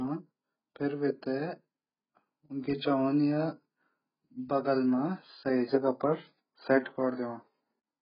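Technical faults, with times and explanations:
Throughout, AAC compression: the speech has nothing above about 5.1 kHz, sounding dull and smeared, with a warbling, fizzy texture on sustained sounds and sibilants. This is likely heavy AAC-LC coding at a very low bitrate, around 12 kbps, which lowers the cut-off and leaves spectral holes.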